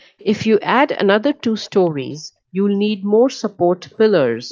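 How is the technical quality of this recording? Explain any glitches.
The speech carries two kinds of glitch: a faint delayed echo in three short spots and a steady ticking through most of the clip.

Echo leak: at 0.19 to 0.25 s, 1.62 to 1.9 s and 3.9 to 3.97 s, a copy of the voice trails about 435 ms behind, about 30 dB down (about 35 dB at the last). Likely a loudspeaker at the other end whose echo canceller let some of its pickup return. The fixed 435 ms lag and distinct copy set it apart from room reverb, which smears continuously.

Clock slip clicks: from 0.51 s to 4.42 s, faint ticks recur about every 0.4 s, around ten in all. Two unsynchronised clocks differ by around 50 ppm, so a sample is dropped or repeated each time the drift adds up to one sample, which fits single-sample slips. Their even spacing and absence in silence distinguish them from random packet-loss clicks.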